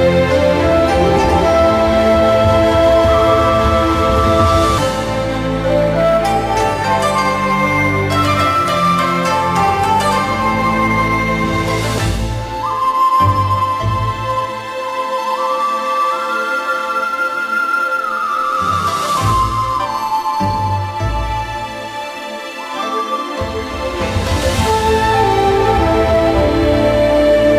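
Throughout the clip, crude rate conversion leaves a gritty, inharmonic fizz riding on loud and high-pitched sound. The pattern points to a 48 kHz to 44.1 kHz change made by dropping samples without filtering, with an error roughly 30 dB below the signal. Unlike steady dither or quantisation hiss, it tracks the signal's level and brightness.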